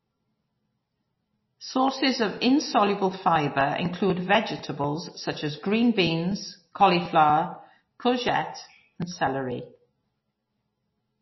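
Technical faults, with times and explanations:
Throughout, MP3 compression: the speech has nothing above 5.8 kHz, so s sounds are dull, and the coding damage is plainly audible across the whole recording. This is likely an MP3 encode at a low bitrate, around 24 kbps. With so few bits, the encoder removes the treble above a fixed cut-off and drops quieter frequency components, which flicker in and out between frames. That gives the sound a watery, swirling texture.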